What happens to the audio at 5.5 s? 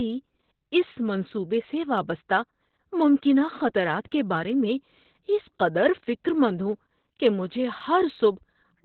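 At 5.5 s the speech carries Opus voice compression at 8 kbps in SILK narrowband mode, with nothing above 4.3 kHz, leaving it muffled, hoarse and slightly robotic. Clock slip clicks, a soft rattle repeating about every 20 ms, also run from 0.11 s to the end; the likely cause is two unsynchronised clocks roughly 0.1% apart dropping or repeating single samples.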